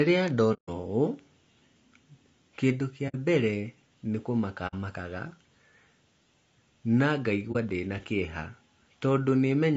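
Speech coded at a low bitrate throughout, which points to a bitrate around 32 kbps, most likely through low-delay AAC (AAC-ELD) compression; at this low bitrate the sound is plainly rough and grainy, with noise filling the gaps between harmonics. AAC frame loss with muting follows: lost frames were decoded as silence, and the overlapping windows fade the sound out and back in, leaving soft-edged holes at 0.53–0.69 s, 3.08–3.16 s and 4.67–4.74 s and a brief dip at 7.52–7.56 s.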